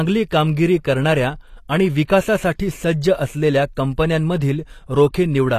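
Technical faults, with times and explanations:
Throughout: HE-AAC compression is the likely cause of the gritty, metallic treble heard across the whole recording, with nothing above 14.9 kHz. The upper band is present, but it is rebuilt from copies of lower frequencies rather than carried directly, so sibilants turn lispy and harmonics fail to line up. The plainly audible damage fits a low bitrate near 24 kbps. Plain low-pass filtering would sound dull instead, without this synthetic sheen.
2.07 s: pre-echo. About 19 ms of short hiss arrives just before a sharp onset, softening its leading edge. The codec spreads quantisation noise evenly across a transform block, so noise sized for the loud attack also fills the quiet moment ahead of it. Because the hiss sits only before the transient and stops at it, this is pre-echo rather than a click, which would be a single impulse, or steady broadband noise.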